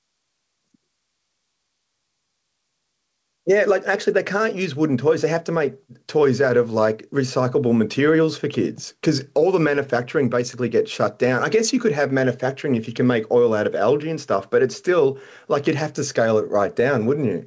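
Gain pumping runs throughout the speech. The gain swings by roughly 5 dB with every loud passage, squashing loud and soft together. The likely cause is microphone gain set far too high, with a fast limiter clamping each peak. Nothing sounds above 8 kHz, which fits G.722 at 64 kbps.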